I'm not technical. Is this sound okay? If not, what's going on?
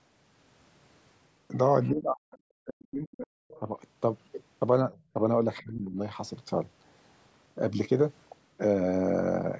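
No, it's a call recording with echo-canceller trouble.

Speech suppressed in double talk: at 1.9–2.34 s, 2.66–3.28 s, 3.6–3.69 s and 5.62–5.97 s the voice sinks, sometimes nearly vanishing. This is likely because both people talked at once and the canceller turned everything down to be safe.

Other side's voice leaking through: faint scraps of a second voice slip in at 2.31–2.38 s, 3.48–3.60 s and 5.57–5.63 s. That's likely the far end playing on the loudspeaker and not quite being cleaned out of the microphone.

Background gated by the echo canceller: from 4.93 to 5.14 s the room sound briefly dips noticeably, then comes back. The canceller clamped the microphone down while the loudspeaker was playing, then let go a moment later.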